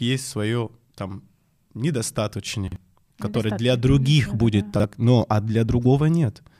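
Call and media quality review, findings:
Chunks out of order, 2.68–2.76 s: brief jumbled blip in the speech. One 40 ms chunk plays one slot late, swapping places with its neighbour; three hard joins. Waveform: discontinuities at each join. Spectrogram: vertical broadband lines, formant tracks jumping back.

Chunks out of order, 4.76–4.84 s: same 40 ms one-slot swap. Probable component: jitter buffer or packet reordering, consistent with 40 ms packetization.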